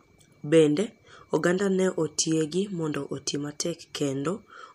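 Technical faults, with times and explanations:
Nothing stood out on listening to this speech clip.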